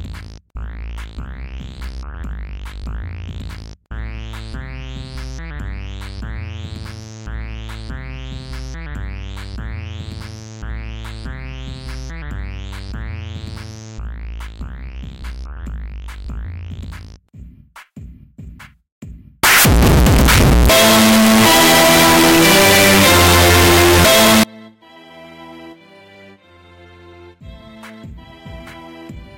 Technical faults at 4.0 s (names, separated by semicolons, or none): none